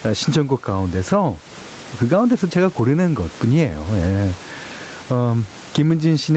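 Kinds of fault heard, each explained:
Gain pumping: The gain swings by around 15 dB, squashing loud and soft passages toward one level. The likely cause is excessive input gain driving a fast limiter.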